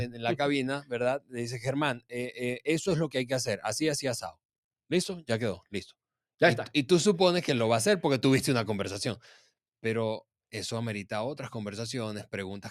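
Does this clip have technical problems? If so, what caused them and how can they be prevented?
Yes. A noise suppressor tuned for speech processes the whole clip, so this is a noise suppressor applied to music or sounds. It mistakes steady and sustained parts of the sound for noise. It turns them down while sharper onsets pass. The level therefore swings by roughly 5 dB as the processing reacts. Held sound and tails thin out. To prevent this, disable speech noise suppression when capturing anything other than speech.

Two short passages show sound cut by the noise suppressor. The first runs from 1.19 to 1.37 s. The second runs from 1.94 to 2.14 s. Each lasts about a fifth of a second. In both, the suppressor judged the sound to be noise and pulled it down hard, by up to about 18 dB. The sound sinks in level there. To prevent these dropouts, bypass the suppressor or set it to a far gentler reduction.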